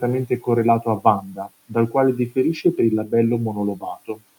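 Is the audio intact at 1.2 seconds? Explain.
No. From 1.21 to 1.48 s there is speech cut by the noise suppressor: it misread quiet speech as background and pulled it down by up to about 10 dB, so roughly a fifth of a second of sound comes out swallowed and faint, sinking toward the room noise.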